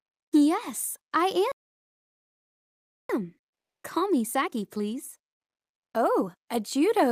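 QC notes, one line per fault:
1.52–3.09 s, playback stall: the sound drops to silence for 1.58 s mid-flow, likely because the player ran short of data or its thread was blocked.
3.09–6.09 s, time-compressed catch-up: audio runs 1.1 times fast at unchanged pitch, as small pieces are cut and cross-faded to clear the backlog.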